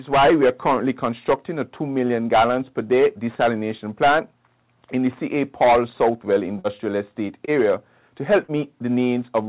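The audio arrives over a call link whose content stops at 4 kHz, which points to a narrowband G.711 codec, and it is hit by three packet-loss events. Twice, at 6.59 to 6.67 s and 8.43 to 8.51 s, a burst of packet loss dropped several consecutive packets. The receiver extended the last sound for about 50 ms while fading it into a held buzz or dying hiss, then resumed with roughly 60 ms of material gone. At 7.45 to 7.50 s, a shorter concealed packet loss left a gap of about 30 ms, which the decoder patched with 20 ms of synthesized continuation, producing a brief smear or wobble where the real signal is missing.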